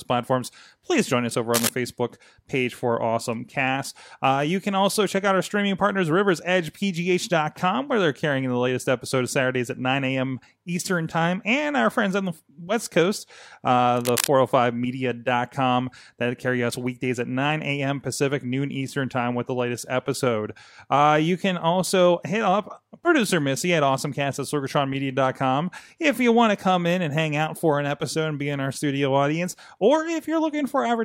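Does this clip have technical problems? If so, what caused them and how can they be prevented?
Yes. Cable scratch noise occurs from 1.54 to 1.69 s, between "please join us over" and "facebook page for awesome", at roughly speech level, and again from 13.96 to 14.27 s, somewhat quieter. The likely cause is a worn cable or connector being moved, so that its contact resistance flickers and adds ragged scratching over the speech. On a spectrogram each event shows as a dense, broadband smear of irregular vertical streaks, and on the waveform as jagged, uneven bursts riding on the signal. Replacing worn leads, keeping connectors clean and firmly seated, and securing cables so they cannot shift during recording prevents it.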